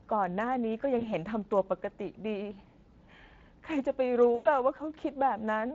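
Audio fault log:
Throughout: Speex codec. The CELP coder has too few bits to model the excitation accurately, which fits a setting near 20 kbps. The speech sounds plainly noisy and hoarse. On a spectrogram, the harmonics look blurred and grainy noise fills the gaps between them.
0.99–1.14 s: VoIP packet loss concealed by the speech codec. About 20 ms of audio went missing, which fits one lost packet. The decoder repeated its last pitch and filter at falling gain, so a brief stretched smear fades. On a spectrogram, flat, stretched harmonics hold steady before the signal dips and recovers slowly.
4.35–4.47 s: VoIP packet loss concealed by the speech codec. About 100 ms went missing, which points to a run of five lost packets. The extrapolated sound stretches and fades, and the sound stays weak just afterward. On a waveform, the envelope shows a steady decline.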